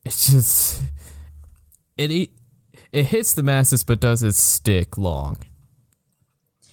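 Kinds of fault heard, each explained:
Clock drift between sender and receiver: The sending end's clock runs slow here, roughly 4% behind the receiver's, so the speech arrives a little too slowly for the playback side. The jitter buffer keeps draining, and the receiver has to fill the gaps by repeating short pieces of audio. That mismatch sits under the whole clip and gives the speech a faintly uneven, dragging timing rather than one obvious glitch.
Repeated timing corrections: From about 0.30 s to 6.17 s the receiver keeps patching in small repeated slices to stay in step with the slow sender, all stretching the audio and never trimming it. The net effect is speech running at about 96% speed, with around a third of a second added over that stretch. Each edit is tiny, so at most you hear slight hiccups and a wobbly tempo rather than clear repeats.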